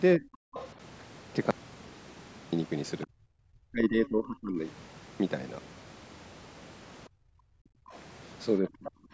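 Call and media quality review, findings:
Speech suppressed in double talk. Speech dips at 0.17–0.24 s (about 20 dB), then is pushed right down from 3.06 to 4.65 s (about 35 dB, roughly a second and a half), and again at 8.61–8.92 s (about 25 dB). Likely the echo canceller, unable to separate near talker from loudspeaker echo while both sides talk, attenuating everything it hears.

Other side's voice leaking through. A faint second voice surfaces at 0.54–0.67 s and 8.85–8.91 s (about 20 dB under the main speech), with fainter scraps at 3.02–3.06 s (about 30 dB down) and 7.92–7.98 s (about 35 dB down). Likely residual loudspeaker echo the canceller failed to subtract from the microphone signal.

Background gated by the echo canceller. Room tone drops away from 7.08 to 7.92 s, about 30 dB deep and close to a second long, returning when the canceller releases. Echo canceller clamping the microphone hard while the loudspeaker plays, so the ambience vanishes along with the presumed echo. 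Band-limited call path with nothing above 8 kHz is expected, not a fault.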